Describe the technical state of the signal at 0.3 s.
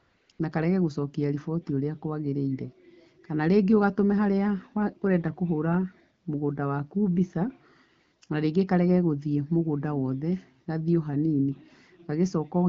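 Right around 0.3 s you're in the middle of AMR comfort noise switching. The phone treated the start as silence, so from 0.0 to 0.29 s and again from 0.31 to 0.39 s the receiver is playing synthetic noise built from a rough level-and-spectrum estimate instead of the real background. That gives a smooth, even hiss that flicks off for about 20 ms at 0.3 s, letting real AMR-WB frames through, then comes straight back.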